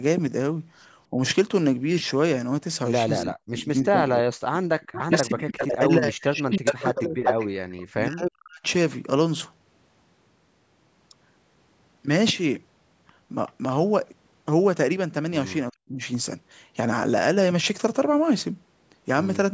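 At 1.11 s the speech dips briefly, by about 10 dB for roughly 70 ms. That's likely speech suppressed in double talk: with both ends active, the echo canceller couldn't tell the local talker from loudspeaker echo and pulled everything down. A faint delayed copy shows up at 3.19 to 3.24 s, about 15 dB below the speech and trailing by 318 ms. That's likely echo leak, where a speakerphone's canceller let some of what its microphone heard slip back into the call.

Things get rough from 3.23 to 8.64 s. The speech keeps getting chopped, with drops as deep as about 40 dB adding up to around 3 s of damage, again likely double-talk suppression. Inside that stretch, from 4.81 to 7.83 s, a 388 ms echo runs at roughly the same level as the speech itself, likely a heavy echo leak. The same 388 ms echo returns as a barely audible scrap at 13.48 s, about 35 dB down, likely residual leak. Then at 15.71 to 16.01 s the speech cuts out again, down by about 40 dB for 300 ms, likely another double-talk suppression.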